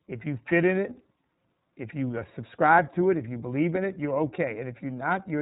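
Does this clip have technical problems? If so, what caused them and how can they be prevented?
Yes. iLBC codec damage runs throughout. Nothing passes above 3.8 kHz, and each independently coded frame sounds rough and synthetic, which fits 30 ms frames at 13.33 kbps. Prevent it by recording or transmitting with a wideband codec at a higher bitrate.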